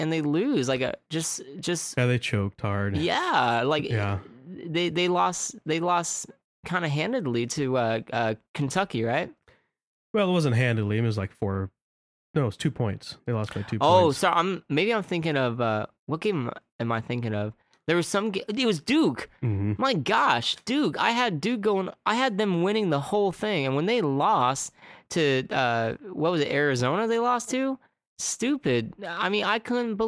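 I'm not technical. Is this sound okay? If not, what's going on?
Yes, this sound is okay, and nothing is going on that needs fixing.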